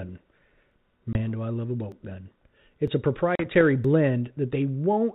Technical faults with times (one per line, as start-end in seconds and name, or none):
1.13-1.29 packet loss on an ADPCM call
1.92 dropped buffer (overrun)
2.87 dropped buffer (overrun)
3.35-3.62 packet loss on an ADPCM call
3.85 dropped buffer (overrun)